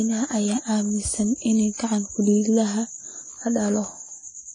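Speech, and the whole thing carries plain AAC compression damage. Nothing survives above 10 kHz, so it sounds dull, and sibilants and held sounds get that smeared, fizzy warble. That's likely a low-bitrate AAC-LC encode, something like 24 kbps, starving the spectrum.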